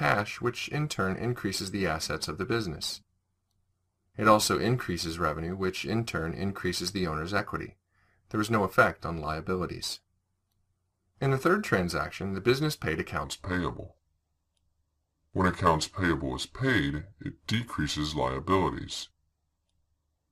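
From 13.24 s to the end, the audio has a section at the wrong speed, running at 0.827 times its original rate. Pitch and tempo fall together at that point, so the sound turns deeper and slower, dropping by roughly three semitones, with the change arriving abruptly rather than as a gradual drift. The likely cause is that portion being played back or rendered against a mismatched clock, stretching its timing and lowering its pitch in one step.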